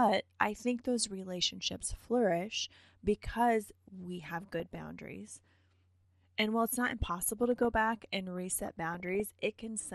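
Speech, with a dull, gurgly graininess all the way through. The top end is thin and seems to flicker in and out, which is the sound of MP2 compression with upper sub-bands being dropped and the remaining ones quantised coarsely. That degree of damage fits a rate around 80 kbps and likely comes from a low-rate digital radio chain. On top of that are four bursts of DAB burbling, where single bands jump in level for up to a frame at a time. The first runs from 1.75 to 2.05 s. The second runs from 4.24 to 4.85 s, right after "because we", and it's the roughest of the four, pointing to a higher error rate, something under one percent. The third runs from 6.74 to 7.65 s, just before "back and", and the last from 8.38 to 9.27 s, just after "back and". Corrupted bits are slipping past the error correction into the audio data, mangling samples and scale factors, and the longer bursts fit a run of several dozen damaged frames.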